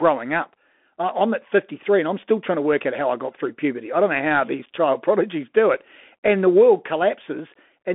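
Throughout, the speech carries the Bluetooth CVSD headset codec: one-bit delta coding, consistent with a 64 kbps link, confines it to 250 Hz–3.5 kHz, adding granular hiss and scratchy sibilants. At 4.66 s, just after "I don't know how", unconcealed Bluetooth headset packet loss drops about one packet, leaving a 7.5 ms silent hole with abrupt edges.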